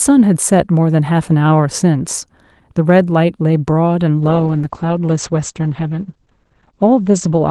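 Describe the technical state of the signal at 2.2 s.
At 2.2 s the speech is intact, with no dropout, click or distortion, only the ordinary character of a call path that carries it through its codec.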